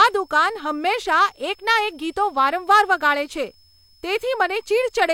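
From the first moment to the last, a switching supply whistle sits under the speech. It's a thin high tone somewhere around 5 kHz, wandering between roughly 5.18 and 5.33 kHz. A power supply is running in an audible burst mode or beating with another one, and its pitch shifts as the load on it changes. It's quiet, something like 35 dB below the speech.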